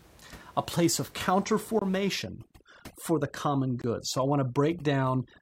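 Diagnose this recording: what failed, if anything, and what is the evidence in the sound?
Gaps between chunks appear at 1.79 to 1.82 s and 3.82 to 3.84 s, each a hole of about 23 ms, spaced 2.0 s apart. That regular spacing points to the storage or playback stage handling the speech in 2-second chunks and inserting silence at each join, either from codec padding or a player that starts each chunk late. Nothing is lost; the sound is only interrupted.

Overdone noise removal runs from 2.17 s to the end of the clip. This is a call-processing fault: a noise suppressor set too aggressively pulls individual frequency bands down hard wherever they sit near its noise estimate. The room noise, about 26 dB below the speech, collapses to near silence with twinkling specks, and the quieter components of the speech are stripped along with it.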